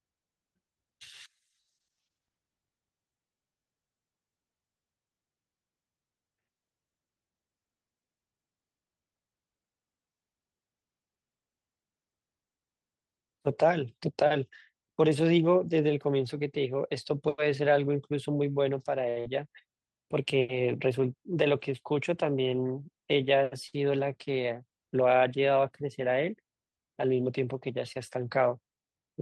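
A short stall from a late packet comes at 19.09 to 19.18 s. A packet arrived late and the jitter buffer ran dry, so the receiver stretched the last sound for about 67 ms and then carried on from the same point. Nothing is lost, but the sound hangs with a faint buzz.

A burst of packet loss follows at 19.20 to 19.27 s. Here packets were lost or came too late to use. About 50 ms of continued, fading sound covers the gap, then playback jumps ahead, dropping roughly 80 ms and shortening the delay built up by the stall.

A second short stall from a late packet, at 23.68 to 23.75 s, holds the sound for about 49 ms before resuming with nothing missing, again leaving a brief smeared hold. The call codec's upper limit sits near 12 kHz.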